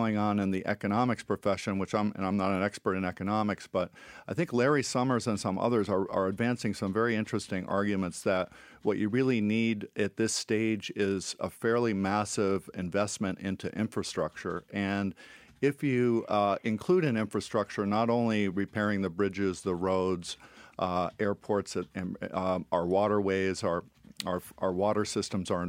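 Nothing stood out on listening to this speech recording.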